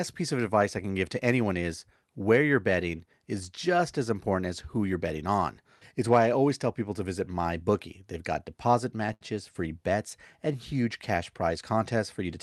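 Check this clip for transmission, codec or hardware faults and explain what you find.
There's one fault: a short stall from a late packet, 9.13 to 9.23 s, between "got deposit" and "free bets and huge". The jitter buffer ran dry, so the receiver stretched the last sound for about 74 ms, leaving a brief held smear with a slight buzz or dip, with nothing actually lost. The Opus call path's top end stops around 12 kHz.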